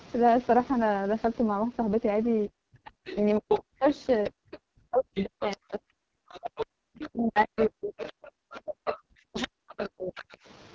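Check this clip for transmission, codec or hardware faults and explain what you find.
Three faults can be heard in the speech: heavy low-rate codec damage throughout, the talker being ducked during double talk, and a second voice leaking through.

AMR wideband (HD Voice) codec damage runs the whole length. At a low bitrate, which fits the 6.6 kbit/s mode, the pulse-driven vocal tract model has too few bits for the excitation. Voiced sound turns rough, raspy and buzzy, with noisy, smeared sibilants.

Speech suppressed in double talk affects the audio from 2.47 to 10.33 s, likely because the echo canceller could not tell the near talker from loudspeaker echo and attenuated everything. For around five seconds in total the voice dips, dulls or drops out in pieces, by as much as about 40 dB at the deepest.

The other side's voice leaking through appears at 3.06 to 3.59 s, 4.24 to 4.58 s, 5.16 to 5.57 s and 6.31 to 10.37 s. 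The likely cause is residual loudspeaker echo the canceller failed to remove. The first burst sits about 5 dB under the talker, the others roughly 10 to 20 dB down. The last is a long continuous stretch. Above 8 kHz there is nothing, as expected from the call's microphone processing.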